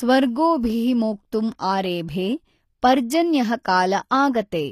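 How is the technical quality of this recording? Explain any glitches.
The recording has plainly audible codec damage throughout. From start to end, the treble sounds rebuilt rather than captured, and nothing reaches above 14.9 kHz. This is likely HE-AAC compression, at a rate that fits roughly 24 kbps. The codec keeps only the lower spectrum and fills the top by copying lower bands upward under a coarse envelope. Harmonics then misalign at the join, so s sounds lose their natural texture.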